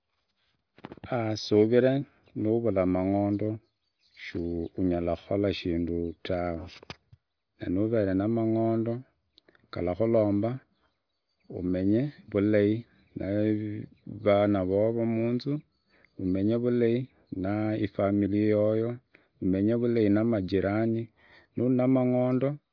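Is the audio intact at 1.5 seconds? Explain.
Yes, the speech at 1.5 seconds is intact, with no dropout, click, distortion or other fault at that moment.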